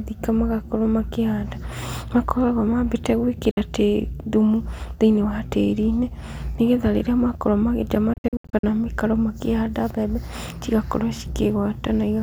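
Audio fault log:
3.51–3.58 s, Bluetooth dropout: a 58 ms hole of silence with abrupt or briefly faded edges. The speech resumes further along rather than where it stopped, so material is lost, not delayed. This fits a few wireless packets that likely missed their deadline.
8.13–8.64 s, Bluetooth dropout: a cluster of short gaps spread over about half a second, losing 290 ms in total, with the longest gap 73 ms. The speech keeps its timing between the gaps, unlike an underrun stall that pushes later sound back. The cause is likely repeated packet loss on the wireless link.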